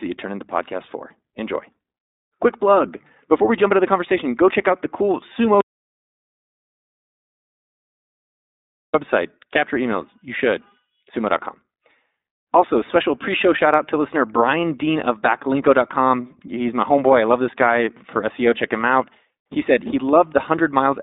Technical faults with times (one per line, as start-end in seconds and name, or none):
0.00-21.02 iLBC codec
5.61-8.94 audio dropout to silence